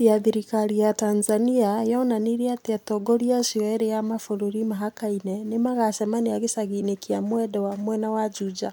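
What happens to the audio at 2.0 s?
Nothing goes wrong at 2.0 s; the speech carries on cleanly there with no dropout, click or distortion.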